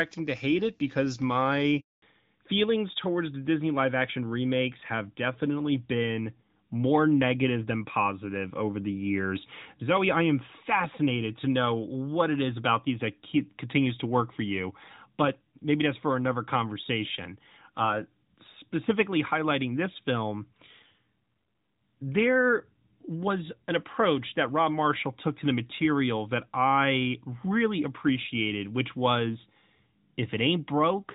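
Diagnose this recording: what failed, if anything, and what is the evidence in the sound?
The network stage is at fault here, with a handover gap from 1.80 to 2.02 s. The speech dies away quickly and leaves about 220 ms of dead air. The call was passed to another network and no speech frames got through until the new link came up.

There is also a fallback to narrowband at the codec stage, starting at 2.02 s and running to the end. Up to that point the wideband HD Voice sound is intact, consistent with AMR-WB at 12.65 kbit/s. Afterwards everything above 4 kHz is gone, leaving the speech duller and rougher, which fits AMR-NB at 12.2 kbit/s.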